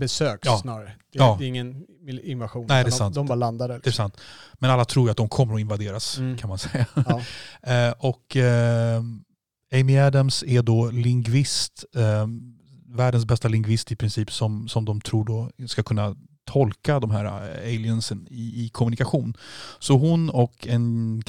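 A short crackle breaks up the peaks from 1.21 to 1.29 s, just before "det är ingen invasion", and a fainter tick comes at 20.40 s. This is hard clipping: the speech overran a stage by about 3 dB, then about 1 dB, flattening its peaks.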